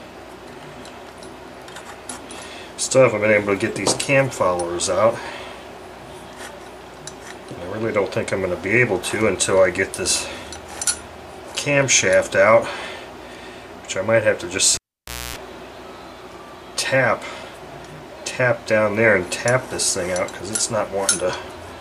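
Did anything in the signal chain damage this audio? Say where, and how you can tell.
Yes: analogue wiring. A cable pulled and plugged in at 14.75 to 15.36 s gives a pop, about 0.56 s of near silence, a 0.26 s burst of 60 Hz mains buzz, then a second pop.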